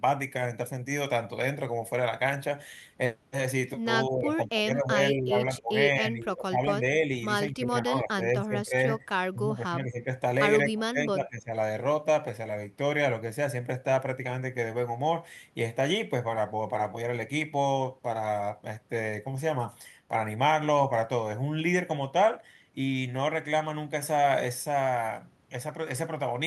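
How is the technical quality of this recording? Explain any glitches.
The recording has one recurring fault: speech suppressed in double talk, at 4.07–5.35 s, 5.55–7.11 s, 7.49–9.14 s, 9.32–10.1 s and 10.63–11.51 s. The likely cause is an echo canceller that could not tell this talker from returning loudspeaker echo while both sides spoke, so it turned the speech down as well. The speech dips by about 15 dB, and by about 20 dB in the last stretch, over roughly 1.0, 1.5, 1.5, 0.7 and 0.7 s of the respective spans.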